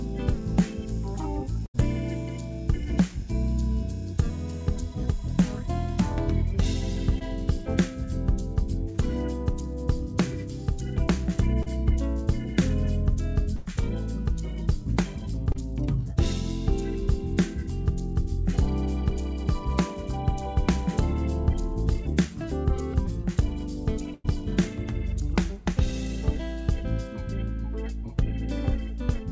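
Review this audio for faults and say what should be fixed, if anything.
At 1.66 to 1.76 s, 13.56 to 13.68 s and 24.14 to 24.26 s, the sound freezes into a fading smear before jumping ahead. This is burst packet loss: 80 to 100 ms went missing and the receiver extended the last sound.

At 7.19 to 7.23 s, 11.63 to 11.68 s and 15.52 to 15.56 s, brief smears or wobbles come from short concealed packet loss, where 20 to 40 ms of lost audio was patched over.

The audio passed through a G.722 call path and has no content above 8 kHz. That is consistent with 64 kbps G.722.

To prevent these faults, enable forward error correction or redundancy and give the jitter buffer more headroom on this network path.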